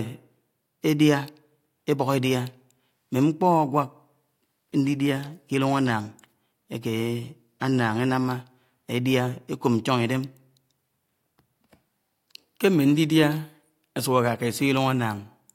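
No technical faults can be heard in this recording.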